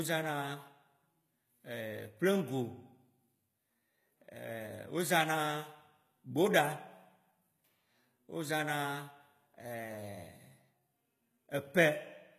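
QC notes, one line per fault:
Throughout, HE-AAC compression: the speech has a bright but gritty top end, with s sounds turning metallic and lispy, and nothing at all above 14.9 kHz. The likely cause is HE-AAC coding at a low bitrate, around 20 kbps by the sound of it. Only the lower spectrum is coded directly, and the treble is rebuilt by copying lower bands upward under a coarse envelope, so the upper harmonics no longer match the originals.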